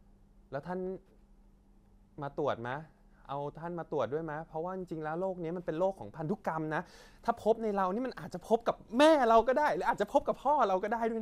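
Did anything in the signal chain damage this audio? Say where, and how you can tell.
Yes, there's a brief burst of DAB burbling at 2.72 s, a watery blip in the speech. Weak reception let bit errors, around a tenth of a percent, slip past error correction into the MP2 data, putting short noise blips in individual sub-bands. That fits a couple of bad frames.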